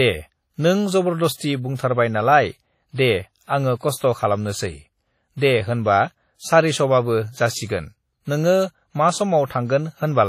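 Throughout the speech, a ringing, washy quality and hiss breathing with the voice point to likely WMA compression, consistent with heavy damage at roughly 32 kbps. A spectrogram shows nothing above 15.1 kHz, smeared transients, and gaps where weak components were zeroed.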